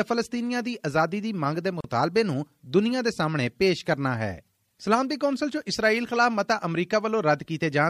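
Separately encoded pieces were joined without trimming, so the encoder's start-up delay and last-frame padding stay in: a gap at a join of encoded pieces. At 1.81 to 1.84 s a gap of about 36 ms opens in the sound, its edges smeared so the silent part is shorter, then the sound resumes where it stopped.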